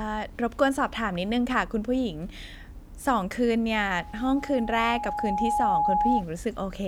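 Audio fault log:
3.95–6.24 s, loudspeaker feedback squeal. A single tone near 834 Hz rises out of the speech and swells over roughly one and a half seconds. It settles at about 5 dB above the speech. The microphone is hearing the loudspeaker it feeds. At this one frequency the loop gain exceeds one, so each pass round the loop makes the tone louder. It keeps ringing until it stops at 6.24 s.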